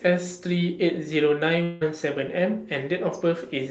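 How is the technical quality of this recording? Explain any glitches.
The recording has one clear glitch. It sounds like audio from a call path: it stops at about 8 kHz and carries coding noise, consistent with Opus at a modest bitrate.

From 1.63 to 1.83 s the speech breaks into a smeared, buzzy continuation of the last sound that fades over about 0.2 s, then the speech resumes with that stretch missing. This is likely a long network dropout: no packets arrived, so the receiver synthesised a stand-in from the preceding audio, and the real content was never recovered.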